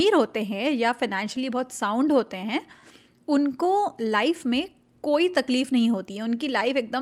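Clock drift between sender and receiver runs through the whole speech clip: the sending side's audio clock runs about 3 percent slower than the receiving side's. Because fewer samples arrive than the receiver plays out, its jitter buffer keeps draining toward empty. Left alone it would run dry, so the receiver has to pad the stream to keep playback going. The result is small timing hiccups that recur all through the clip at uneven intervals.

Repeated timing corrections follow from that drift, from 0.28 s to 6.38 s. The receiver repeatedly repeats short slivers of audio to refill its buffer. Every edit goes the same way, lengthening rather than trimming, and they are unevenly spaced. Together they add something like 150 ms and leave playback at about 97 percent of natural speed. Each edit is tiny, heard, if at all, as a slight hiccup or a stretched, unsteady tempo.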